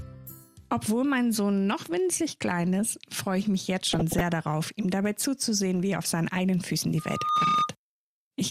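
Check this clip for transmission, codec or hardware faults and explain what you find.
Two faults are audible, one transmission fault and one hardware fault.

From 3.90 to 4.21 s there is DAB burbling. Weak reception lets bit errors, at a rate of a fraction of a percent, slip past error correction and corrupt sub-band samples and scale factors across what sounds like a dozen or so frames. Individual bands jump in level, giving short blips of noise in single sub-bands. Unlike a steady tone, it has no fixed pitch.

From 6.98 to 7.73 s a loudspeaker feedback squeal appears. A microphone picks up its own loudspeaker, and the loop gain exceeds one at 1.2 kHz. That single tone swells in under half a second to about 5 dB above the programme. Its one steady pitch separates it from the scattered blips of the burbling.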